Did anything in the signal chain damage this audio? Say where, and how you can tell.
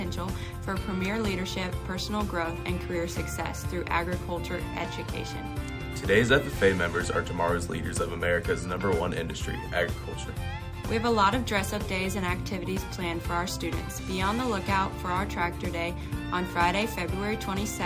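No, nothing in the signal chain damaged this audio.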